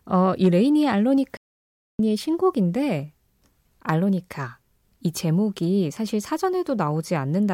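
At 1.37 s the speech halts in a playback stall, going fully silent for about 0.62 s until 1.99 s. The player likely ran out of data or was blocked. Unlike a brief dropout click, this is a long, clean silence mid-flow.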